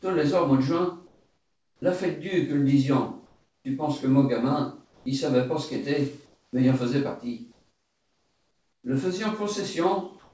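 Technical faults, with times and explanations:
1.07–1.82 s, 3.26–3.65 s, 4.85–5.06 s, 6.26–6.53 s, 7.52–8.84 s and 10.19 s to the end: comfort noise in place of the background. In each quiet stretch, lasting from about 0.15 s to 1.32 s, the real background gives way to a smoother synthetic hiss. It is about 5 dB lower at 1.07 s and 7.52 s, about 4 dB lower at 4.85 s, about 2 dB lower at 3.26 s and 6.26 s, and at the same level in the final stretch. The likely cause is discontinuous transmission, where the receiver fills untransmitted pauses with generated noise.
1.77–1.82 s and 6.51–6.53 s: onset clipped by the voice detector. The sound returns abruptly, without its soft start, after about 50 ms and about 20 ms of comfort noise, respectively. The likely cause is the sender's voice detector reacting late to the onset, so those opening moments were never sent and generated noise was played in their place. 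In the band-limited call audio, nothing above 8 kHz is heard, which fits G.722 at 64 kbps.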